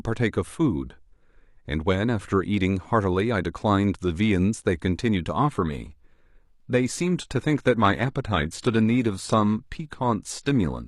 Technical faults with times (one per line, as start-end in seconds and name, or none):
5.37-10.88 adaptive stream at a lower bitrate